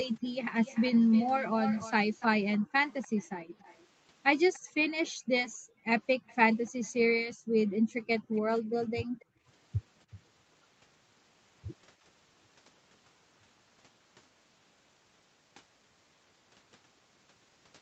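From 0.21 to 0.37 s the room sound under the speech drops by about 40 dB for roughly 150 ms. This is background gated by the echo canceller: it hears the far end on the loudspeaker and clamps the microphone. The same brief gap recurs at 2.58 to 2.78 s (about 40 dB) and 4.64 to 5.86 s (about 37 dB, roughly half a second in total). The longest comes at 7.33 to 9.47 s, about 40 dB and around a second in all. Unlike a dropout, the ambience returns cleanly once the canceller releases, with nothing missing from the signal path.

From 0.63 to 4.71 s a second copy of the speech trails it by 292 ms, about 15 dB down. This is an echo leak, likely from loudspeaker sound that the far end's canceller did not fully remove. It recurs much weaker, about 30 dB down, at 6.27 to 6.9 s and at 8.24 to 9.25 s, where the delay is 277 ms. A room reflection would arrive within tens of milliseconds, but this copy comes back a round-trip delay later, separate from the original.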